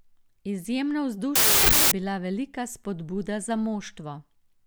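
A wrong sample width fault runs from 1.36 to 1.92 s in this speech clip, just before "bila velika". Audio written as 16-bit integers is read as packed 24-bit integers, so each decoded value straddles mismatched bytes and only some keep the signal's real top bits. The result is a burst of loud noise with the speech buried inside. Because three bytes now make one sample instead of two, the buried speech runs 1.5 times fast and raised in pitch.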